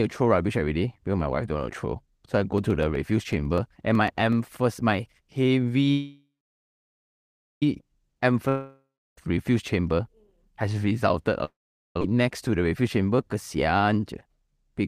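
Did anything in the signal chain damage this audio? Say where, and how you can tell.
Yes. Periodic USB or driver dropouts run from 2.58 to 4.70 s, starting just after "I go". The speech picks up regular ticks every 0.124 s, about twenty in all. Each one is a tiny skip, roughly half a millisecond of audio jumped over, so the waveform steps abruptly and clicks. The even spacing points to the driver or USB buffer stage: something on the host is stalling the audio path on a fixed schedule.

A call audio freeze sits between 5.92 and 7.63 s, likely caused by packets held up on the network so the receiver's jitter buffer ran dry. The last sound is stretched into a fading buzz, then about 1.34 s of silence, 1.7 s of inserted time in all. When speech resumes it carries on exactly where it stopped, with nothing missing, so everything after is pushed about 1.7 s later.

Long network dropouts occur at 8.49 to 9.18 s and at 11.45 to 12.02 s, the second just after "has resulted a". 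These are likely network losses. Each time the last sound decays into a short buzz, then silence of about 0.33 s and 0.44 s. When audio returns it has jumped ahead: about 0.87 s of speech is gone in the first, about 2.0 s in the second.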